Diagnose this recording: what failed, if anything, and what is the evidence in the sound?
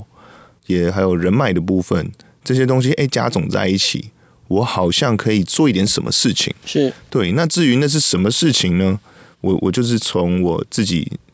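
Nothing in this speech recording points to a failure at any stage of the chain. What can be heard of the call microphone processing is its normal signature: the lowest bass is trimmed and there is no content above 8 kHz.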